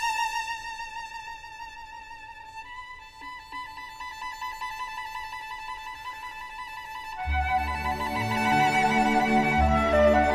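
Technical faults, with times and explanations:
No technical faults can be heard anywhere in the audio, and the signal holds steady with no disturbances to its level, timing or continuity.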